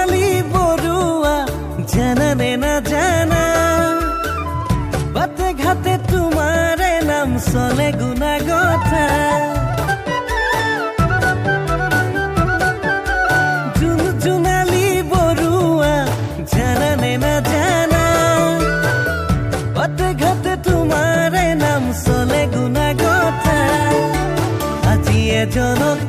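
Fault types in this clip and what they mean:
Stream segment skipped: At 9.87 s the sound jumps abruptly forward, with a brief blip, as if part of the programme is missing. This is likely a stream segment that failed to load, so the player moved on to the next one.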